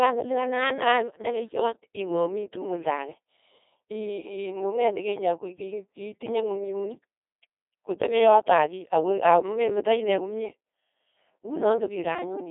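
Throughout, the speech carries the signature of a Codec 2 vocoder, consistent with its 2.4 kbit/s mode. Only pitch, voicing, energy and a spectral envelope survive; the decoder rebuilds the voice from sine waves, heavily damaged, robotic and buzzy, confined to roughly 300 Hz to 3.6 kHz.

From 1.08 to 1.20 s, bit errors on digital voice radio corrupt the vocoder parameters, at a rate of a few percent, which fits about three frames being hit. Pitch, level and timbre jump abruptly, producing a brief warbling, bleeping burst of gibberish.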